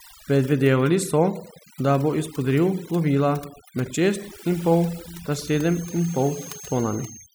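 From start to finish, the gaps between phrases fall to near silence scattered with twinkling specks. This is overdone noise removal: an overly aggressive reducer has cut frequency bands sitting near its noise estimate, taking quieter voice detail with them.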